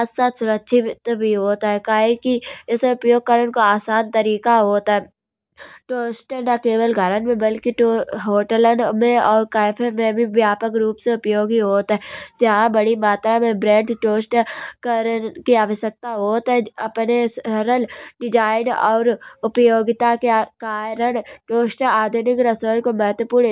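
No technical faults can be heard anywhere in this speech recording. There is nothing to place on a timeline, as no moment stands out as a fault.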